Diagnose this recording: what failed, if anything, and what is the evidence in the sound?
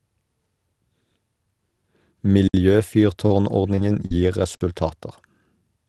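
Driver or buffer stage: an underrun with held sample at 2.48 to 2.54 s and again at 4.55 to 4.61 s, each 60 ms. The output buffer ran dry and the converter held its last value. The waveform shows a flat line; the spectrogram shows a blank vertical band. Nothing was lost, so the speech resumes where it paused, with a gentle restart.

Network stage: repeated packet loss (robotic sound) from 3.26 to 4.11 s, with five gaps, the longest 40 ms, and about 100 ms rebuilt in all. The jitter buffer on the Opus call path patched each hole by extending the preceding sound. On a spectrogram these patches appear as smeared, frozen harmonics, and the waveform shows short repeated cycles, giving a choppy texture.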